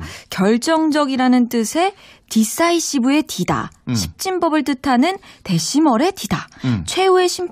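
Listening closely to the speech recording, nothing stood out as a technical problem at any point.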